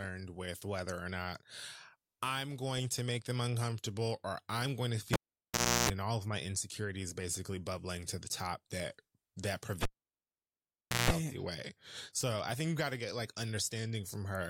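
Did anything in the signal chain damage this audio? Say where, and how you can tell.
Yes. The analogue wiring was disturbed twice: a cable was pulled and plugged in at 5.13 to 5.90 s and again at 9.83 to 11.10 s. Each event opens with a pop, drops to near silence for 0.71 s and then 1.23 s, and brings a 60 Hz mains buzz lasting 0.33 s and 0.17 s while only the plug tip makes contact. A second pop marks the return of the speech once the connector seats fully.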